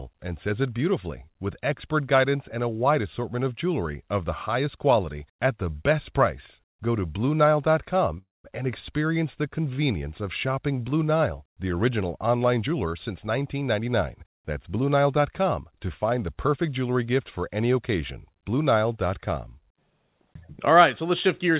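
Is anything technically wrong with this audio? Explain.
Yes. There are two faults in this speech clip.

From 8.18 to 8.46 s there is a call audio freeze. The last sound stretches into a fading buzz, then goes silent for about 0.19 s. The likely cause is delayed packets emptying the jitter buffer. Speech then resumes where it stopped, with nothing lost.

From 12.62 to 15.20 s, just after "the original online", there is a jitter buffer speed-up. The speech runs about 10% fast at unchanged pitch and sounds hurried. The buffer had built up excess delay, so it trimmed tiny pitch-period slices, roughly a third of a second in total.

The call path's band limit is audible too, with nothing above 4 kHz. That fits a G.711 codec.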